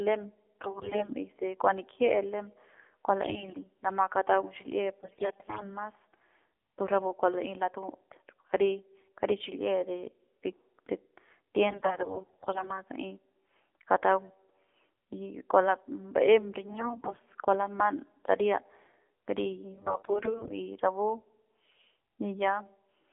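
Speech here, squeezed through the AMR narrowband mobile codec for the whole clip, so the band sits between 300 Hz and 3.5 kHz and the voice comes out buzzy and synthetic, which fits a low mode around 7.4 kbps. On top of that there are six bursts of AMR bit errors, where a fair share of the weakly protected bits flipped and the pitch and level hold but the voice goes hoarse and gargly: 0.61–1.14 s, 3.24–3.65 s right after "lem kua", 5.02–5.67 s, 11.68–12.71 s, 16.66–17.19 s between "kua ba'em" and "kua laman saria", and 19.74–20.53 s just before "y rapu".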